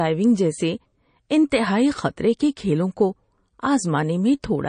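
Throughout, the speech sounds watery and swirly, with nothing above 9.4 kHz; the cause is likely MP3 compression at a low bitrate, around 34 kbps.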